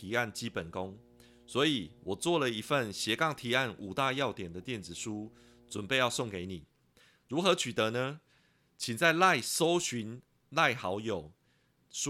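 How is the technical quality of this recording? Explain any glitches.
The recording has one fault. Mains hum runs from the start to 6.44 s: a ground loop or nearby transformer leaks the 60 Hz power line into the signal. It sounds like a steady low drone with some low harmonics, roughly 30 dB below the speech.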